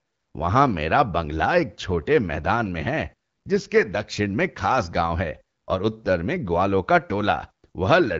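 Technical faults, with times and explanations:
No technical faults are present in this speech, so there are no times or explanations to give.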